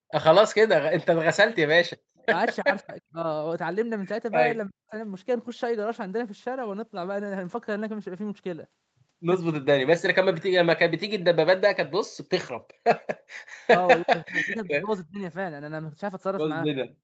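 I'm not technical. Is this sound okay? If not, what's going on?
No. At the very start, 0.00 to 0.09 s, the echo canceller clamped down on the microphone (background gated by the echo canceller), so the room sound briefly drops away.

The most likely cause of the repeated dips is speech suppressed in double talk. With both sides talking at once, the echo canceller turned everything down, so the speech dips or cuts out at 1.34 to 1.58 s, 2.24 to 3.23 s, 4.68 to 4.95 s, and for longest at 13.65 to 15.21 s.

Around 2.18 to 2.26 s there is likely an echo leak, where the canceller let some loudspeaker sound slip through, leaving a very faint copy of the speech about a third of a second late.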